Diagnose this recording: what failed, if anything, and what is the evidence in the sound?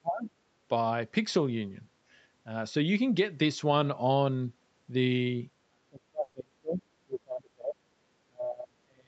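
The call's echo processing, likely reacting to both sides talking at once, clamped down on the near talker's speech. It could not separate local speech from loudspeaker echo, so it attenuated everything. The speech dips by roughly 25 dB from 0.0 to 0.3 s, then by roughly 35 dB from 5.68 to 6.82 s, 7.05 to 7.79 s, and from 8.26 s to the end. These are speech suppressed in double talk: stretches where the talker sinks, thins and partly vanishes.

In the call processing stage, the echo canceller left a trace of the loudspeaker signal in the microphone path, likely during that same opening overlap. The result is the other side's voice leaking through from 0.26 to 0.3 s. It is a brief, faint scrap sitting far below the main speech, roughly 30 dB down.

At the network and jitter buffer stage, a burst of packet loss hit between 6.23 and 6.38 s. That falls inside the 5.68 to 6.82 s suppressed stretch. 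The receiver filled 120 ms by stretching the last received sound and fading it, so a held buzz or decaying hiss replaces real audio. The speech then picks up further along, with 120 ms of the original simply gone. The codec's cutoff at 8 kHz bounds all of this.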